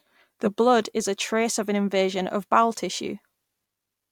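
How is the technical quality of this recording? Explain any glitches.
Nothing in the recording stands out as a glitch, so there's no technical fault to explain here.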